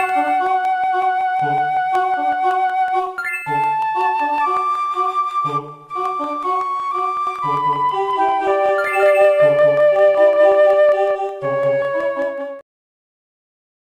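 From 7.27 to 12.61 s a doubled audio track appears: an equally loud, dry copy trails about a fifth of a second behind, likely from a second capture path.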